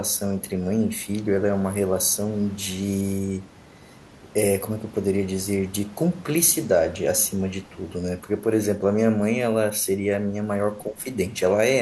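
An echo canceller most likely lost track of which sound was its own talker and which was loudspeaker echo while both sides spoke at once. It clamped down on everything, producing speech suppressed in double talk from 10.87 to 11.01 s, near the end of the speech. The level falls by roughly 15 dB at its deepest. For about 150 ms the talker sounds abruptly pushed back and thinned, then the level recovers.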